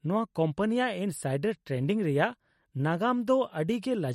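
MP3 compression damage runs through the whole clip. Nothing is heard above 16 kHz, where the treble is cut off, and the speech has a plainly audible watery, swirly coarseness. That is likely the result of an MP3 encoder starved of bits, consistent with a rate around 48 kbps. The encoder discards the top band and lets weak frequency lines drop in and out from frame to frame, which produces the unstable texture.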